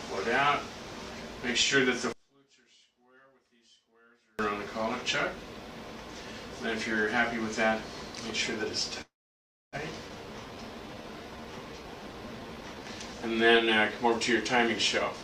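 From 2.13 to 4.39 s, one stereo channel has likely been inverted in polarity, so summing to mono cancels the shared content and the sound drops by about 36 dB.

At 9.01 s a call audio freeze begins, likely from packets being held up until the jitter buffer ran empty. A brief fill tails off into about 630 ms of silence. Playback resumes at 9.76 s with nothing missing, just 712 ms later.

From 10.09 to 10.12 s, a skip ahead drops around 0.4 s of audio. Playback jumps forward with a nearly seamless join.

From 10.26 to 12.85 s, a jitter buffer slow-down repeats short stretches to build up a reserve. Playback runs at 86% speed at unchanged pitch, adding 370 ms.

From 15.14 s to the end, a jitter buffer speed-up cuts about 70 ms to reduce the delay. The last moment rushes past at 179% speed.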